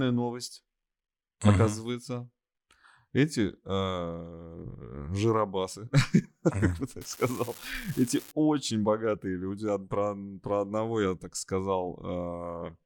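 From 7.01 to 8.31 s, right after "как бы" and up to "очень богатые люди про", there's an unreliable data bit: one marginal data line flips at random, throwing same-sized spikes of about −27 dBFS, so you hear a steady fizzy crackle riding under the speech.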